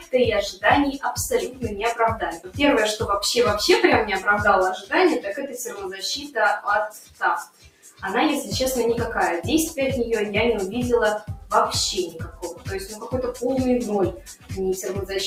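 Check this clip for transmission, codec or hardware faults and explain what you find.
The clip has a processing fault: a speech-oriented noise suppressor left running on non-speech material, which produces both a constant pumping character and seven distinct dips.

Noise suppressor applied to music or sounds, throughout: the suppressor treats sustained tones, ambience and reverberant decay as if they were background noise and keeps pulling them down, while onsets pass. Gain therefore swings by around 10 dB across the clip, heard as pumping and thinning of held material. On a waveform the envelope breathes unevenly. On a spectrogram, onset columns stay bright while the sustained bands after them fade early.

Sound cut by the noise suppressor, at 1.45–1.67 s (about 11 dB down), 2.31–2.59 s (about 16 dB), 4.77–4.92 s (about 14 dB), 5.27–6.37 s (about 13 dB), 6.89–8.03 s (about 16 dB), 12.13–13.42 s (about 11 dB) and 14.16–14.52 s (about 16 dB): in these spans the suppressor classified the signal as noise and attenuated it beyond its usual swing. 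Steady or fading parts sink or have their decay cut short. The waveform shows hollowed envelope sections, and the spectrogram shows darkened patches after attacks.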